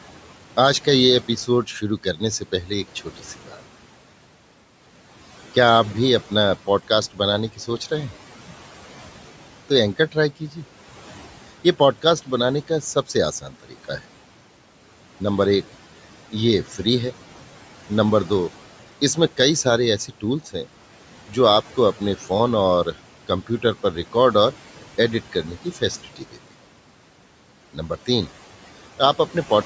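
At 2.95 to 3.61 s, 13.41 to 13.89 s and 26.04 to 26.38 s, the noise suppressor mistakes bits of speech for background and pulls them down about 10 to 11 dB, so the speech sounds swallowed.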